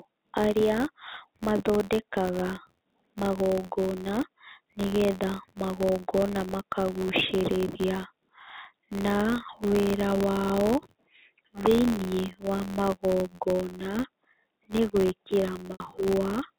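A speech clip carrying a steady buzz at about 86.1 Hz from start to finish, the signature of a filter restarted on every block: the filter loses its memory at each block boundary and starts again from zero, so every block opens with a small transient. The tick rate points to a 512-sample block, and the buzz grows and shrinks with the speech level rather than sitting at a fixed loudness. Just after "nĩ gwĩkĩra", from 15.72 to 15.80 s, there is packet loss with pitch repetition: about 80 ms of audio went missing, which fits four lost packets, and the receiver covered the gap by repeating the last pitch period while fading it down. The result is a brief held, buzzy tone before the signal resumes through a short cross-fade. The clip also passed through G.711 A-law telephone coding at 64 kbps, which restricts the band to below 4 kHz, and its quantisation noise is faint at most.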